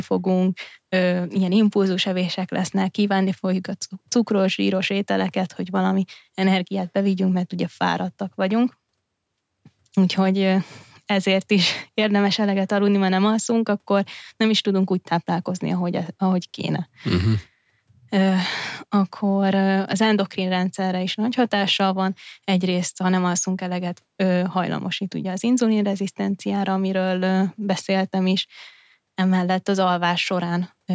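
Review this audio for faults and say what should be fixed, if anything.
Nothing stood out on listening, so there is nothing here that needs fixing.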